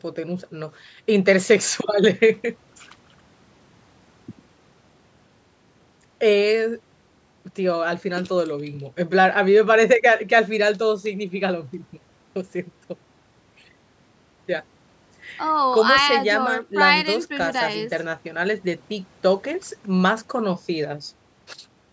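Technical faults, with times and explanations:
No technical faults are heard in this speech, which has passed through normal call microphone processing.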